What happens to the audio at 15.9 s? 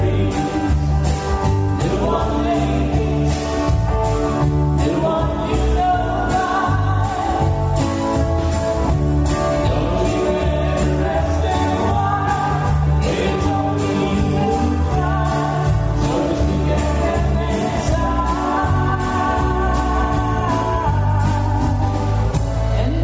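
Gain pumping is audible at 15.9 s, as it is across the whole clip rather than at that instant alone. The likely cause is input gain set far too high, with a fast limiter or compressor clamping down on each loud sound. The gain swings by around 10 dB, leaving the sound squashed and its dynamics flattened within the call's 8 kHz bandwidth.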